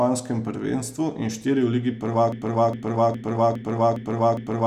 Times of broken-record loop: 2.32-4.67

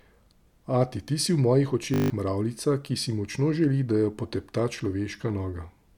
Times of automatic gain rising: none

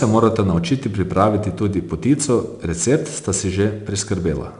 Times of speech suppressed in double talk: none

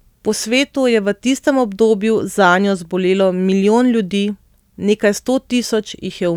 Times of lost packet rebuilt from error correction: none

